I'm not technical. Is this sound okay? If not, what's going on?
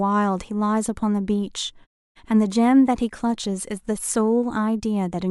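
Yes, this speech recording has no technical problems that need attention.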